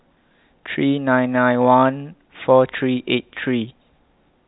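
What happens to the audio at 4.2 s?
At 4.2 s the speech runs on intact, with no dropout, click or distortion, only the narrow telephone band of G.711 coding, which passes nothing above about 3.9 kHz.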